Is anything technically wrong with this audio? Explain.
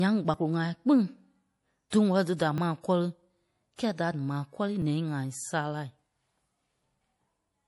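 Yes, the speech has three kinds of fault.

Throughout, the sound is watery and swirly with plainly audible damage, likely MP3 compression at a bitrate around 48 kbps. A spectrogram shows nothing above a fixed cutoff and flickering holes.

At 0.34, 1.68, 2.58, 3.59 (after "dí da ma kɔ́ri"), 4.82 (after "da m̀aa kɔ́rii") and 7.0 s there are small skips, likely dropped buffers from overruns. About 10 ms is lost at each, or about 30 ms at 2.58 s. The waveform shows a sudden discontinuity but no gap.

Pre-echo appears at 1.90, 2.36 (just before "da ma kɔ́ri") and 3.76 s, spreading 23, 32 and 27 ms. Each attack is preceded by a short hiss, seen as a smear before the onset.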